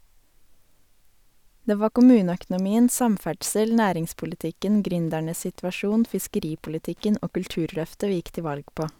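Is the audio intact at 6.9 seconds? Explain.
No. At 6.9 s the speech is overlaid by Wi-Fi interference running from 5.04 to 7.33 s, just after "var kommuneøkonomien samferdsel næringspolitikken". A nearby radio's 102.4 ms beacon bursts are rectified in the circuit, giving steady ticking about ten times a second, roughly 40 dB below the speech.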